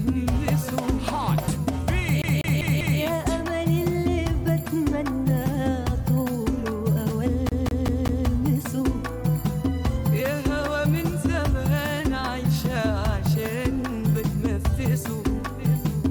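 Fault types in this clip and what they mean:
CD stuck on one turn: a scratch keeps knocking the laser back one track, so a slice of about 196 ms plays four times over, from 2.22 to 3.00 s and again from 7.49 to 8.27 s, heard as a fast, even stutter. On a waveform the same short shape repeats at regular spacing with tiny gaps at each jump; a spectrogram shows identical blocks stamped side by side, separated by thin vertical seams.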